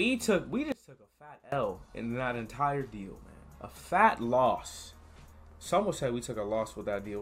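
One channel inverted, from 0.72 to 1.52 s: the sound drops by about 21 dB for that stretch. The likely cause is one stereo channel flipped in polarity, so material common to both sides cancels when they are combined, leaving only their difference.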